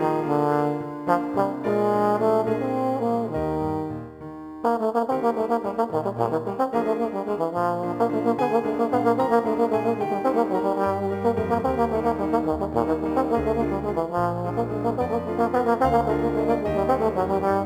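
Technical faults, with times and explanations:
Throughout, crude rate conversion: the audio was stepped up from a lower rate to a higher one, fitting a move from 44.1 kHz to 48 kHz, by simply repeating the nearest sample rather than filtering. The duplicated samples fall in a regular pattern set by those two rates, adding spurious inharmonic tones roughly 30 dB below the signal. They come through as a gritty, buzzy fizz riding on the louder and brighter parts of the sound.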